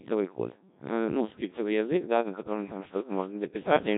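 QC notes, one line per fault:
throughout: Codec 2 vocoder. The speech is rebuilt from sine waves using only pitch, voicing, energy and a spectral envelope. That gives the heavy robotic buzz and nothing above 3.8 kHz, which fits a 1.3 kbit/s mode. Unlike a simple low-pass or a waveform codec, none of the original waveform survives.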